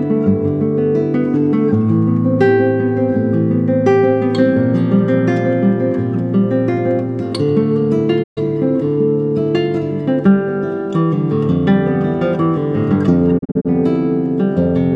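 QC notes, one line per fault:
8.22–8.39 s, digital broadcast dropout: the audio fades out over 20 ms and mutes for about 128 ms, which fits four lost 32 ms frames. The receiver silenced output until valid frames resumed, and the missing programme does not return.
13.37–13.67 s, digital broadcast dropout: short scattered mutes totalling about 128 ms are spread across 256 ms, none longer than 32 ms, each with 20 ms fades. Isolated bad frames were muted one at a time.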